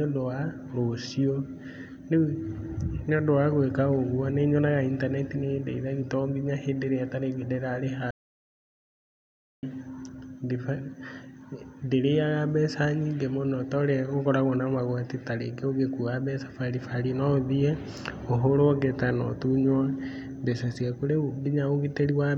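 At 8.11 s the speech cuts off abruptly in mid-flow and the track falls to complete silence until 9.63 s, an audio dropout to silence lasting about 1.52 s. No room tone or background hiss remains in the gap, so the input was likely lost while the recorder kept writing zeros. On a waveform this shows as a dead-flat line, and on a spectrogram as a fully black vertical band, with speech resuming sharply afterwards.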